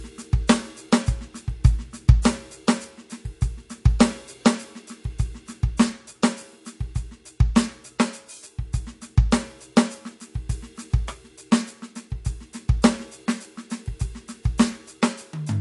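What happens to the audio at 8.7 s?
At 8.7 s the music has lost its treble above 11.3 kHz and sounds watery and swirly, as it does throughout. Likely cause: heavy MP3 compression, fitting about 48 kbps.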